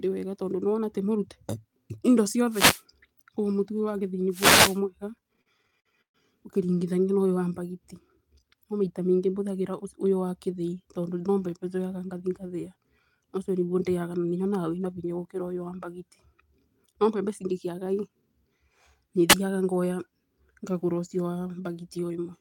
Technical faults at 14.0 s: none

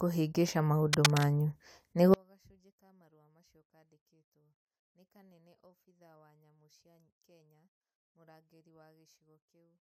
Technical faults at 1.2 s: cable scratch noise

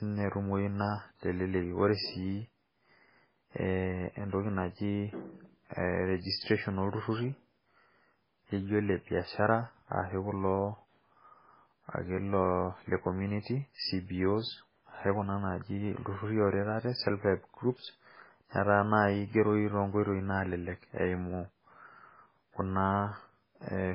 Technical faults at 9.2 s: MP3 compression; clock slip clicks

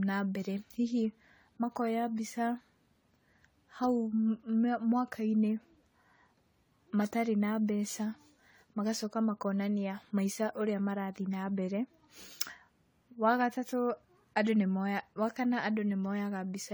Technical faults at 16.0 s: generation loss

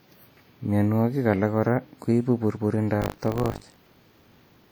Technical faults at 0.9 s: WMA compression

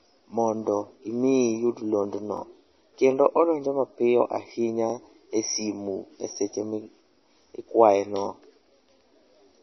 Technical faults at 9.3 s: MP3 compression

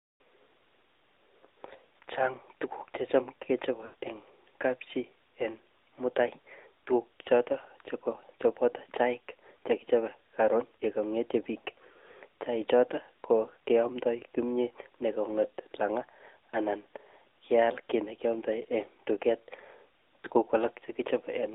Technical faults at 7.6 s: AMR narrowband mobile codec

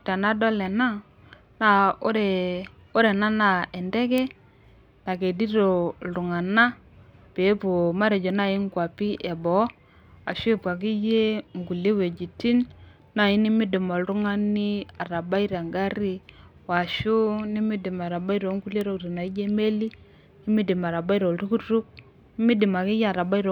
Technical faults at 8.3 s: bit error spike

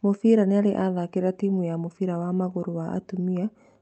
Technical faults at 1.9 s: none

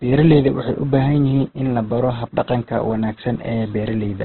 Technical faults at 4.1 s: Opus compression

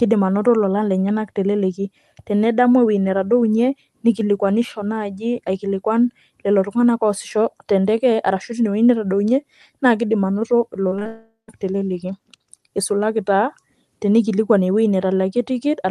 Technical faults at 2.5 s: none

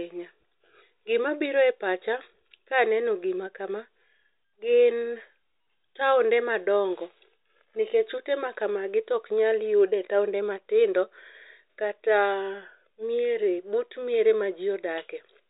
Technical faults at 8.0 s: none

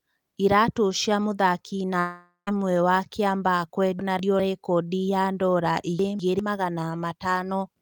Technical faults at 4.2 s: chunks out of order

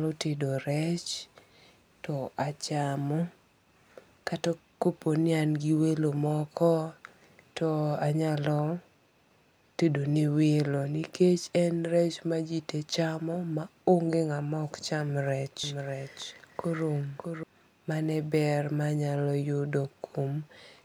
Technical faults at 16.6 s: doubled audio track

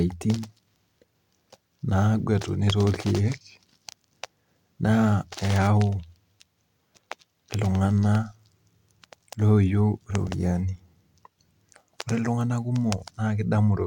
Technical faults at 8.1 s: none

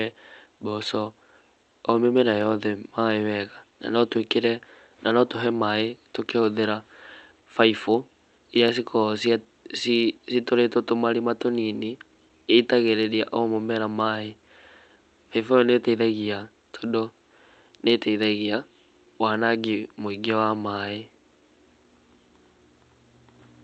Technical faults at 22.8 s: clock drift between sender and receiver; repeated timing corrections

